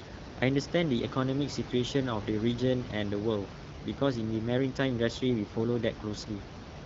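No technical faults can be heard anywhere in this speech recording. Room noise sits about 12 dB below the speech, and the AMR wideband (HD Voice) codec, running at 12.65 kbit/s, leaves only light coding traces.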